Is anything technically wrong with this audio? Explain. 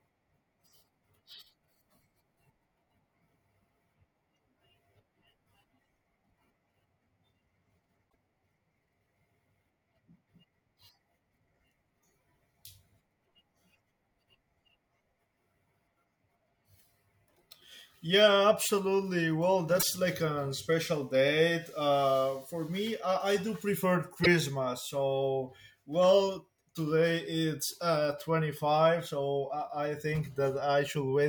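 Yes. Damaged data in a compressed stream occurs three times, at 8.06 to 8.15 s, 19.76 to 19.83 s and 24.24 to 24.27 s. Corrupted bytes make the decoder misread frames and lose sync while it hunts for the next header, producing brief chirps or squawks that interrupt the speech.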